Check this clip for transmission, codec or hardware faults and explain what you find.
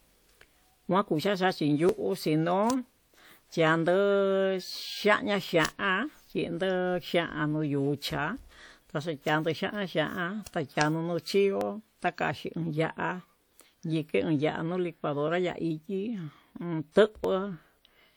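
Three small skips in the speech, at 1.89, 11.61 and 17.24 s. Each is a point where the sound jumps forward, losing roughly 10 ms, or a few ms in the last one. That's most likely a dropped buffer (overrun): samples weren't collected in time and were overwritten.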